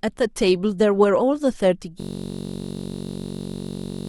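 At 2.00 s a system hang loop begins and lasts to the end. A 21.33 ms slice repeats, giving a steady buzz near 46.9 Hz, which fits a 1024-sample buffer.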